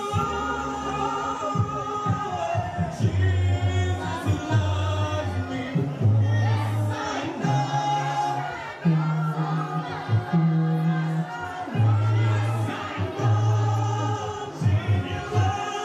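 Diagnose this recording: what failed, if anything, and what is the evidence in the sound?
Nothing failed here as far as I can hear; there's no stage in the chain pointing to trouble, so there's nothing to chase down.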